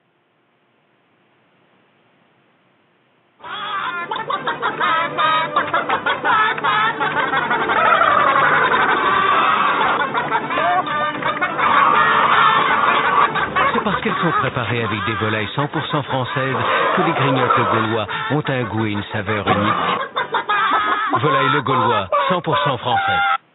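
Nothing technically wrong can be heard anywhere in the audio. No event in the recording calls for a time, a value or a cause.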